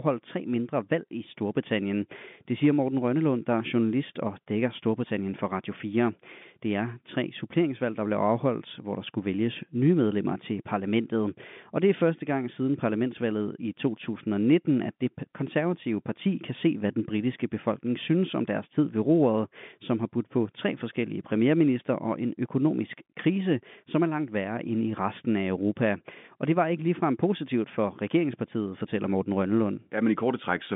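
No technical faults are audible.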